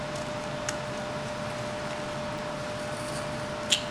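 Periodic USB or driver dropouts run through the audio from 0.37 s to 3.88 s: brief losses of around a millisecond, filled with silence, recur every 0.5 s, about seven in all. A background task stalling the USB bus or audio driver on a fixed schedule briefly starves the stream. They sound as regular ticks heard only over signal. The strict half-second spacing sets them apart from random clicks caused by interference or sporadic buffer underruns.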